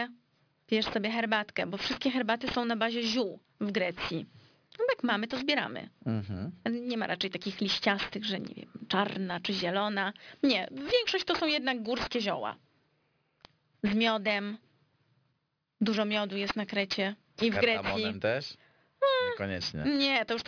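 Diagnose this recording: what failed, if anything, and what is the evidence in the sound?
Aliasing from unfiltered sample-rate conversion, throughout. Sibilants sound gritty and metallic. On a spectrogram, speech runs hard to a 5.5 kHz edge, and mirrored energy sits roughly 15 dB down.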